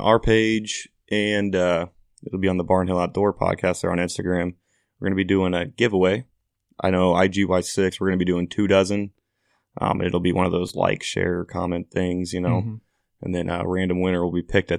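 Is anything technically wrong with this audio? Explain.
Yes, there are two repeated-buffer glitches in this speech. At 7.72 s, after "a giveaway I know", a piece about 5 ms long plays twice. At 10.68 s, between "it'll be one of" and "like share comment things", the same length of piece plays four times. New audio arrived late, so the device replayed its last buffer, which suggests a buffer of about 5 ms. Because the buffer is so short, each repeat sounds like a click or a brief buzz. About 5 ms and 15 ms of audio are lost at the two points.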